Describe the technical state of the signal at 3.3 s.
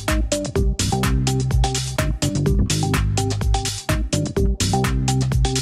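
At 3.3 s the signal is intact, with no dropout, distortion, or other fault audible at that point.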